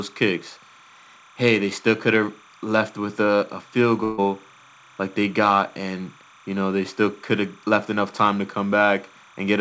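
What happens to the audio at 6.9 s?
Linear timecode is leaking into the speech from a neighbouring track or cable, a timecode bleed present for the whole clip, 6.9 s included. Its square wave, running at 29.97 frames per second, flips between tones near 1 and 2 kHz, giving a steady chirping warble roughly 30 dB below the speech.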